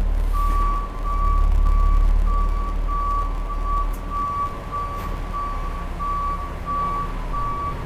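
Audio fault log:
0.00–5.36 s, block size mismatch (truncated): each block's tail is dropped, giving a 100 Hz buzz and audio running 1.09 times fast at normal pitch, unlike a resampling speed-up.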